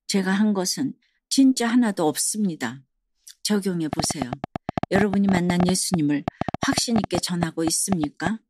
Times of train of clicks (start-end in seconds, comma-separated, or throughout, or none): 3.93-8.28